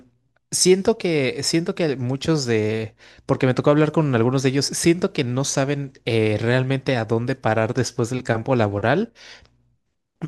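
No technical faults can be heard in the speech at any point.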